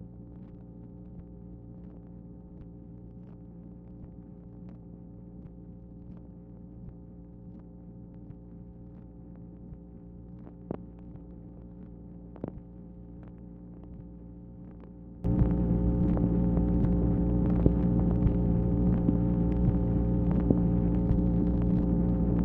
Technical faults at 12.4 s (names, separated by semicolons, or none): one channel inverted